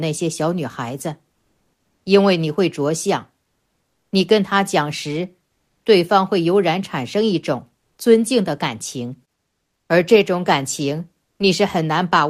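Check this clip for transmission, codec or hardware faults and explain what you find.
One codec-related fault stands out, comfort noise in place of the background, from 1.33 to 2.05 s. For those 720 ms the real background, which sits about 57 dB below the loudest parts, turns into a flat, featureless hiss whose level shifts by about 3 dB. The likely cause is discontinuous transmission of the kind Opus uses: the sender detected no activity and stopped sending audio, so the receiver filled the gap with synthetic noise shaped only roughly like the room until the sound resumed.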